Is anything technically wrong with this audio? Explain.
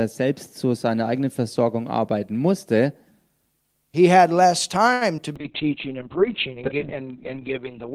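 Yes, there are three separate transmission faults, all clustered just after "had less".

Short stall from a late packet, 4.93 to 5.03 s: a packet arrived late, the jitter buffer ran dry, and the receiver held the last sound for about 76 ms before resuming exactly where it had stopped. Nothing is skipped, but that sound is stretched, with a faint buzz or dip. On a spectrogram the harmonics run flat and unchanged across that span. In the waveform, a repeated, slightly decaying cycle pattern replaces natural movement, and everything afterwards sits 76 ms later.

Short concealed packet loss, 5.17 to 5.34 s: roughly 20 ms of audio never reached the decoder. The receiver covered the gap by extrapolating from the preceding sound, then cross-faded back into real audio, leaving about 20 ms of extra material. It is heard as a brief smear or wobble in which a short consonant may disappear. A spectrogram would show a small blurred patch where fine detail is lost. 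The waveform would show a softened, slightly irregular stretch at the joins.

Call bitrate drop, 5.37 s to the end: the bandwidth estimate collapsed and the encoder was forced down to very few bits. The sound fits a fall from around 48 kbps to about 6 kbps. The audio turns coarse and watery and becomes muffled, because content above 4 kHz is removed where it previously reached 20 kHz. On a spectrogram the upper region is cut off sharply at 4 kHz for the remaining 2.6 s, with blocky, smeared detail below that.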